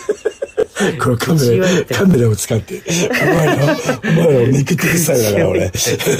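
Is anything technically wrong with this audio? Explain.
Yes. At 0.60, 2.11, 3.37 and 4.90 s there is a tiny stutter, a fragment of about 23 ms heard twice with a hard join. This is a repeated buffer: fresh audio arrived late, so the last block replayed, which fits a 1024-sample buffer and drops about 20 ms each time.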